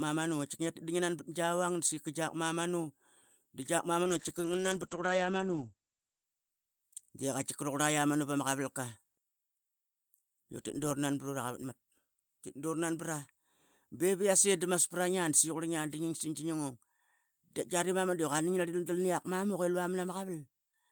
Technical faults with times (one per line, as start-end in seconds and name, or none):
4.04-7.07 call bitrate drop